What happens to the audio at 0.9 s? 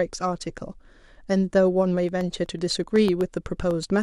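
At 0.9 s the speech plays through intact, with no dropout, click, distortion or other fault at that point.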